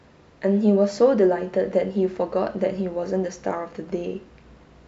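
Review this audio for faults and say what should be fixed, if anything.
Nothing to fix; no faults found in the speech, so no corrective action is needed.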